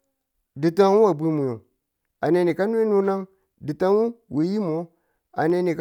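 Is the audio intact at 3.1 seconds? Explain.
No. From 2.50 to 5.50 s, periodic USB or driver dropouts skip a sliver of audio once per second, heard as regular ticks over the speech.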